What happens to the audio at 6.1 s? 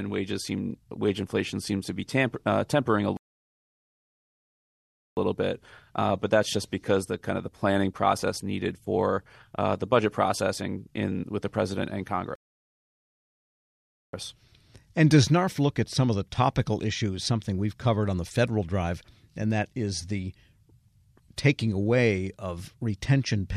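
At 6.1 s the speech carries on intact, with no audible fault at that moment.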